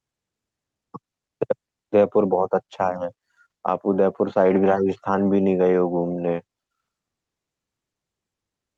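Nothing to flag here, just speech coming over a normal call connection, with the codec and jitter buffer doing their everyday job.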